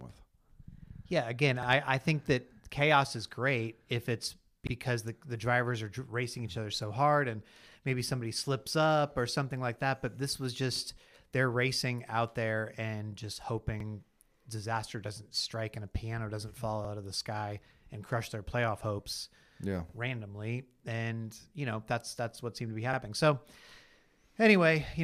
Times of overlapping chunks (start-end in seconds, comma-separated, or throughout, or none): 1.63-1.67, 4.67-4.72, 7.72-7.76, 10.76-10.80, 13.80-13.85, 16.85-16.89, 19.89-19.94, 22.94-22.98